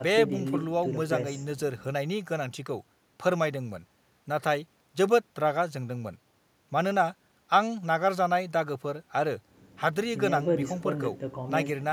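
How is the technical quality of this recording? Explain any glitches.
No technical glitches can be heard anywhere in the recording, and the speech signal stays continuous and intact throughout.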